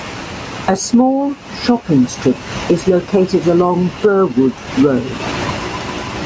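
Gain pumping runs through the whole clip. The gain ducks hard under each loud syllable, a swing of around 20 dB. Speech levels sound squashed together. The likely cause is excessive input gain with a fast limiter clamping down.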